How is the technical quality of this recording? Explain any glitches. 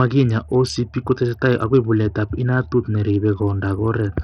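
The technical quality is poor. Heavy codec damage runs through the whole speech clip. The treble is thin and flickers in and out. A gritty, grainy noise rides on the sound, with harsh aliased edges. This is likely Bluetooth SBC compression. SBC splits the audio into a few wide bands. At a starved bit budget, which fits roughly 64 kbps, the top bands lose their bits. The rest are coarsely quantised.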